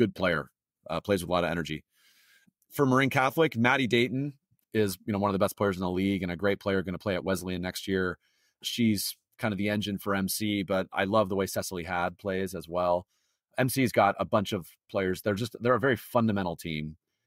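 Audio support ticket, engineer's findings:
Listened through the whole speech recording and found nothing to flag, so no faults to report on this one.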